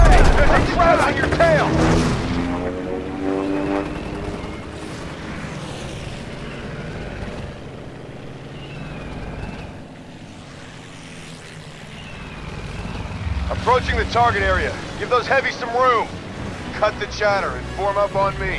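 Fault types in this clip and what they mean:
Nothing stood out on listening; no faults could be heard anywhere in the clip.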